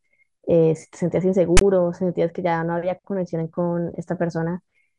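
A harsh, hard-edged rasp of static bursts from 1.57 to 1.61 s, with silence where the padding falls: file tags played as audio, text and zero padding read as samples.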